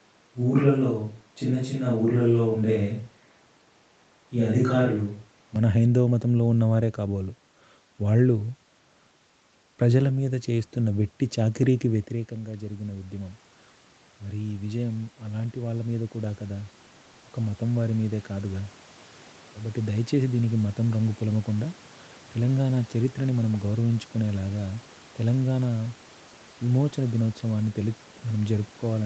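Up to 5.56 s the speech already sounds roomy, hollow and thin in the bass at an unchanged level, likely from a switch to a distant microphone.

After the talker moves back at about 12 s, speech and background noise swell together from 12.28 to 21.59 s as automatic gain rising adds about 12 dB.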